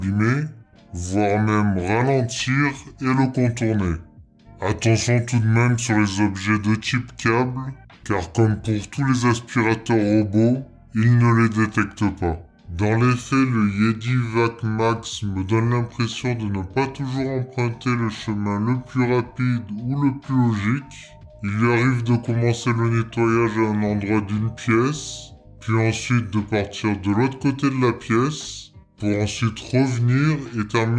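Across the whole clip, the playback runs at a slower rate than the recording's, with no resampling. This is a wrong sample rate fault. The slowdown, to 0.689 of normal speed, fits material captured at 32 kHz being clocked out at 22 kHz. Because speed and pitch are tied together, everything lands about 6.45 semitones low and stretches out in time, giving the audio a dragging, sluggish, uniformly darkened character from start to finish.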